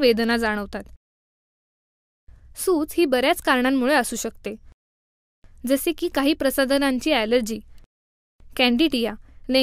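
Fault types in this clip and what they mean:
No technical faults can be heard in this audio.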